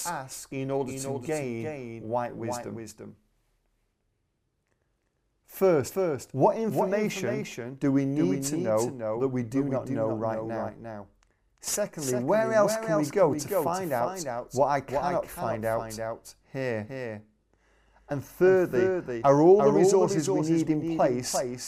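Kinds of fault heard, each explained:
Doubled audio track: the speech recurs as one dry full-band copy about 400 ms late and about 5 dB quieter, without an echo's decaying repeats, likely from a slower capture path.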